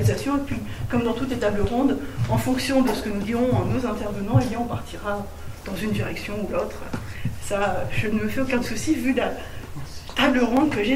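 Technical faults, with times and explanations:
1.05 to 10.57 s, clock drift buffer slips: a short click recurs about every 1.9 s, some seven times, with an evenly spaced rhythm unlike random digital clicks or packet-loss dropouts. The likely cause is two devices on separate clocks differing by roughly 200 ppm. The buffer between them slowly drifts until a tiny block of around fifteen samples is dropped or repeated. Each splice breaks the waveform, giving a brief tick rather than an audible gap.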